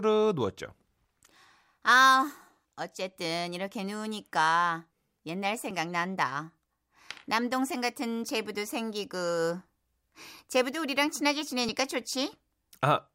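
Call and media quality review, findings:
Audio missing between chunks: brief skips with no gap at 5.71, 7.70 and 11.69 s, a few milliseconds each, on a 2-second grid, likely at the recorder's chunk boundaries. The regular spacing and absence of silence distinguish it from random network dropouts.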